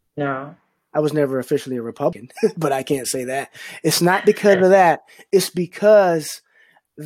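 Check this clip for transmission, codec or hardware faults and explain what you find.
One fault shows up in this speech clip: damaged data in a compressed stream, at 2.12 s, just after "was never officially a". Corrupted bytes made the decoder misread or reject frames and hunt for the next frame header. It is a brief chirp, squawk, click or hole, and that garbled, codec-shaped quality sets it apart from a clean network dropout.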